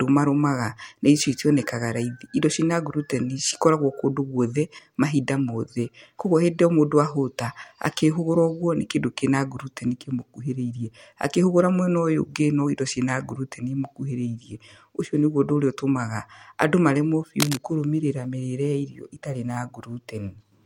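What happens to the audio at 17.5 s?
From 17.40 to 17.57 s a burst of cable scratch noise, dense uneven crackle only slightly below the speech, rides over the sound, likely from a worn cable or connector moving.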